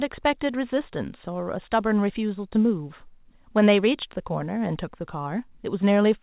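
No technical faults can be heard in this speech.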